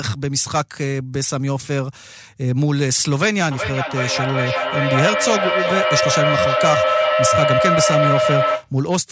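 From 3.51 s to 8.73 s, a piercing tone around 700 Hz swells over the speech, pulsing roughly every 0.4 s and peaking about 2 dB above it. This is feedback howl: sound looping from loudspeaker back into microphone gains level each trip.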